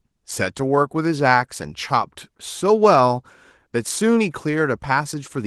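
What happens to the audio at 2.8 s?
Nothing goes wrong at 2.8 s: the speech there is intact, carrying only the light, full-band Opus voice coding it is delivered through.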